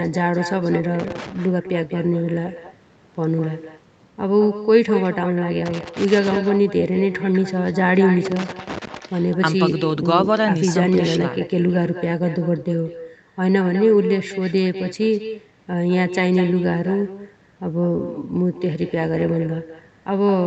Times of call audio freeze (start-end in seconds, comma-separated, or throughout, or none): none